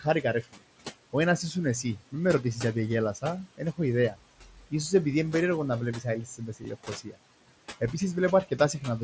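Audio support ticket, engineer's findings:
Noise suppressor artifacts, whole clip: suppressor pulls steady background down by about 18 dB frame by frame, so the noise floor sinks in pauses and comes back under speech.

Speech cut by the noise suppressor, 0.42–0.59 s, 4.45–4.72 s (just before "σω επειδή είναι περίεργο"), 6.26–7.18 s (just after "είναι περίεργο να βλέπεις"): suppressor misread soft speech as noise. Dips of about 17, 13 and 18 dB; roughly 150, 150 and 400 ms swallowed, faint.

Concealed Bluetooth headset packet loss, 6.64 s: one short loss on the mSBC headset link, about 7.5 ms, patched by repeating the best-matching recent stretch of waveform. Single gap, so nearly inaudible, buried inside the third suppressor dip.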